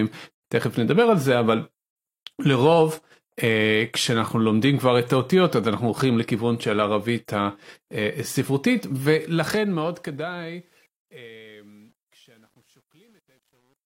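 At 0.31 s the speech drops into a silence of about 134 ms, ending at 0.44 s, and then resumes exactly where it stopped. This is a gap at a join of encoded pieces. Two separately encoded segments were butted together without trimming, so the encoder's start-up delay and the padded final frame of the earlier piece both remain in the file. The edges of the hole are softened by the codec's own smearing.

From 9.02 s to the end at 13.90 s, the fade-out that begins around 9 s shows truncation distortion on a fade. The gain stage drops low-order bits without dither, which fits a word length of about 10 bits. As the level sinks toward the smallest quantisation step, the waveform collapses into a few coarse square steps. The tail turns gritty, and from 10.53 s onward it is at its worst.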